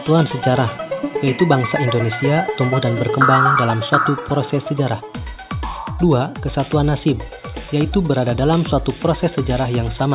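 Nothing stood out as a technical fault on listening to the clip.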